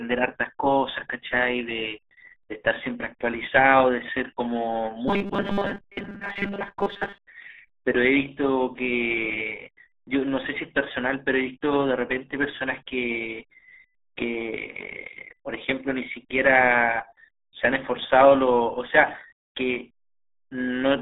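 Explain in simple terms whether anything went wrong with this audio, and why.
Yes. The whole clip sounds muffled, boxy and gargly, like speech heard down an old phone line. That is the RealAudio 14.4 codec, an early speech format built for dial-up modems. To squeeze the voice through a very thin connection, it throws away everything above about 3.6 kHz and keeps only a narrow band of roughly 300 Hz to 3.6 kHz. That loses the crisp, airy part of the voice and smears what remains.

From 5.08 to 7.22 s the voice turns into a stiff, metallic buzz that still roughly tracks the speech. This is robotic sound from repeated short buffers. It is likely caused by new audio arriving too slowly, so the player keeps replaying the last tiny slice, about 5 ms long, to fill the gap. Those rapid repeats stamp a fixed 200 Hz hum onto the sound, and most of the real audio in that stretch is skipped.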